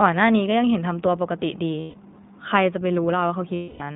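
The iLBC codec shapes the whole clip. It is a narrowband VoIP coder that encodes each short frame's excitation independently, so the speech is confined to a telephone band of roughly 150 Hz to 3.7 kHz. Everything above is gone, and the voice has a plainly audible rough, synthetic edge. The frame behaviour heard later fits iLBC's 20 ms mode at 15.2 kbps.

Lost iLBC frames appear first from 1.80 to 1.96 s, a 140 ms gap that fits seven missing 20 ms frames. The decoder fills the hole by repeating the last pitch cycle blended with noise, so the gap sounds like a held, faintly buzzy vowel. A longer loss follows from 3.54 to 3.82 s, about 260 ms, where that concealment tone fades as it stretches on. Because each frame decodes independently, the voice snaps back cleanly after both.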